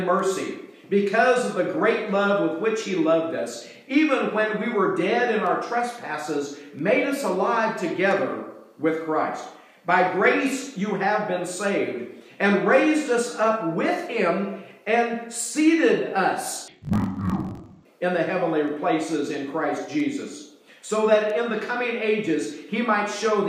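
From 16.68 to 17.87 s the audio drops a full octave and turns doubled and choppy, with blocks arriving at about 46.9 Hz. That's interleaved audio read as planar. Each 21.33 ms block, which fits a 1024-sample block, gets split into halves that both play at half speed.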